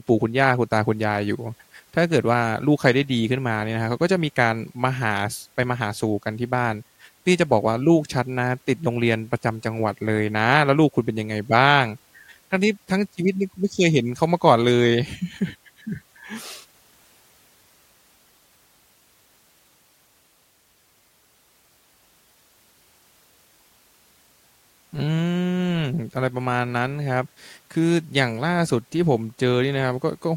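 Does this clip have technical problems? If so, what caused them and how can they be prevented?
No, this clip has no technical problems.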